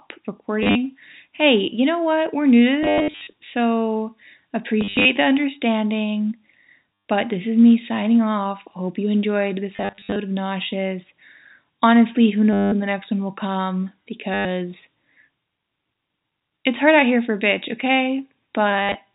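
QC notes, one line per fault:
0.63–0.75, 2.83–3.33, 4.81–5.05 (just before "the understanding"), 6.94–7.05 (just after "the understanding"), 9.74–10.16, 12.53–12.72, 14.34–14.45 (after "next one will come"), 18.71–18.95 s: packet loss with last packet repeated. Lost packets, which sound like 10 ms units, were concealed by replaying the previous one. Runs of up to 100 ms therefore buzz robotically at about 100 Hz over the band-limited G.711 telephone audio.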